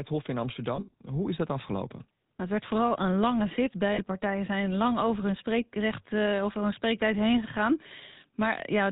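Speech coded with the GSM full-rate codec has a buzzy, gravelly roughness throughout, consistent with its 13 kbps pulse-excited vocal-tract model. On a spectrogram, energy stops sharply at 4 kHz, and the harmonics look coarse and grainy. There are lost GSM frames between 0.76 and 0.93 s, where about 120 ms of sound drops out in patches, the longest around 70 ms. Another 40 ms loss falls at 3.94 to 4.02 s, just before "partijen zijn lang over". In each gap the decoder repeats the last good frame, so the sound becomes a metallic ring. On a spectrogram this shows as frozen, smeared horizontal bands, and the waveform shows a repeating pattern.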